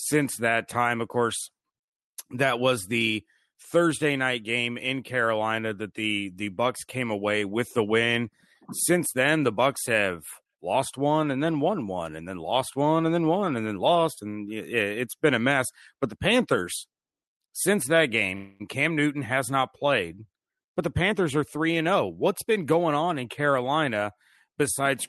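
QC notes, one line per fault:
18.35–18.62 s, call audio freeze: right after "since that" the speech stalls into a brief buzzy or hissy tail that fades out, then carries on from where it stopped with nothing lost. Likely the jitter buffer ran empty while packets were delayed, inserting a 245 ms gap.
20.42–22.89 s, jitter buffer speed-up: leading up to "on in" the speech sounds hurried, running at 110% speed with its pitch unchanged. Surplus audio had built up in the buffer, so the receiver cut many pitch-period-sized slices, about 200 ms in total.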